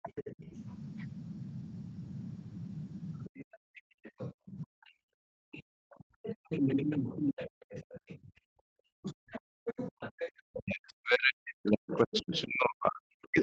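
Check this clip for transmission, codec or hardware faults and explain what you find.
The clip has echo-canceller faults in several stretches, on a call path whose Opus coding stops at 8 kHz.

Speech suppressed in double talk, at 0.0–0.39 s, 3.27–8.97 s and 9.95 s to the end: the speech dips by up to about 40 dB, likely because the canceller mistook overlapping talk for echo and turned everything down.

Other side's voice leaking through, at 0.16–0.35 s, 3.36–10.57 s and 11.91 s to the end: a second voice sits about 15–20 dB below the speech, likely residual loudspeaker echo the canceller failed to remove.

Background gated by the echo canceller, at 9.25–9.66 s: the canceller clamped the microphone hard while the loudspeaker played, so the room sound falls away by about 40 dB, then returns.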